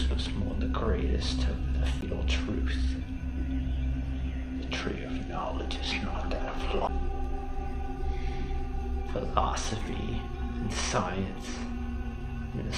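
The audio has two CD skips, at 2.01 s and 6.87 s: a tick and a very short mute of about 10 to 15 ms, then playback resumes from another turn of the disc's spiral. Unlike a plain dropout, the sound then continues from a different point rather than where it stopped.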